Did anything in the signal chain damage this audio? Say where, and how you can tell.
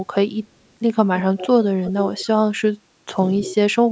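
Yes. The damage is in call processing. There is an echo leak at 1.37–1.47 s, 1.83–2.28 s and 3.47–3.55 s. A faint copy of the speech trails it by 260 ms, roughly 10 to 15 dB down. The far end's echo canceller likely let loudspeaker pickup through.

The speech is also suppressed in double talk at 2.64–3.15 s and 3.50–3.88 s. The level drops in pieces, by roughly 35 dB and then 25 dB. The canceller likely confused the talker with the echo and turned both down.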